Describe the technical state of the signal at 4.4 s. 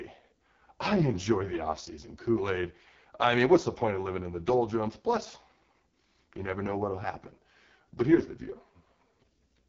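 At 4.4 s the speech carries AMR wideband (HD Voice) codec damage present throughout: rough, raspy vocal-tract modelling fitting the lowest 6.6 kbit/s mode, with nothing above 7.5 kHz.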